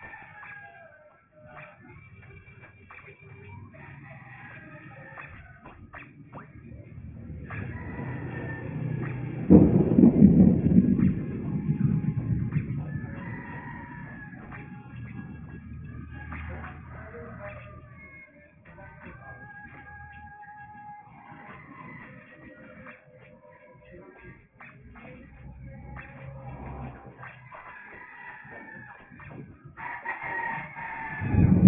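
Aliasing runs through the whole clip, from start to finish. The audio was resampled downward without an anti-aliasing filter, and everything above a fold point near 3 kHz mirrors back as unrelated, gritty tones roughly 25 dB under the signal, which fits a drop to a 6 kHz rate.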